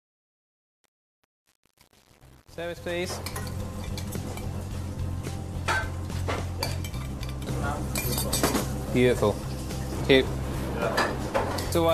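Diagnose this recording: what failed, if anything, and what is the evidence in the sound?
The fade-in's gain stage or sample-format conversion kept too few bits and added no dither, producing truncation distortion on a fade. From 0.0 to 3.52 s, as the sound fades in from the very start, the quietest part is gritty, because low-level samples snap to a handful of coarse square steps. The coarseness fits roughly 8-bit resolution. It clears as the fade reaches full level at 3.52 s.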